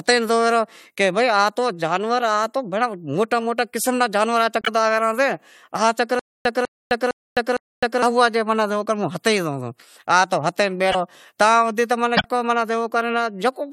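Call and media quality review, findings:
Broken MP3 bit reservoir, 4.61–4.68 s: frames likely dropped in the MP3 stream; the following frame reads its borrowed reservoir bits from another frame's data. The audio jumps ahead, followed by about 70 ms of chirp or noise burst.

Broken MP3 bit reservoir, 10.91–10.95 s: same fault, a likely cut in the frame sequence. Garbled decode lasts about 43 ms, under two 26.1 ms frames, so it is a brief blip with a skip forward.

Broken MP3 bit reservoir, 12.16–12.26 s: likely another run of lost frames; reservoir lookback lands on the wrong bytes. About 97 ms of corrupted output, close to four frames, heard as a burst or a short hole before playback resumes further on.

Stutter with silent gaps, 6.19–8.02 s: player or stream likely stalled, replaying the last buffered fragment on each retry and then running dry. A 198 ms fragment repeats 4 times, separated by 259 ms of digital silence, a steady 458 ms cycle. 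Speech from that stretch is lost.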